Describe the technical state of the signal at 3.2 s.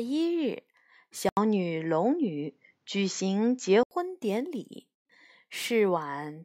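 At 3.2 s the speech sounds duller and boxier, with nothing above 7.6 kHz, a level shift of around 5 dB, and a new background noise floor roughly 50 dB below the signal. The span runs from 1.29 s to 3.91 s and opens with a silence of about 80 ms at the switch. The likely cause is the input switched to a poorer device in mid-recording, whose narrower band, different gain and own noise replace the original microphone's character.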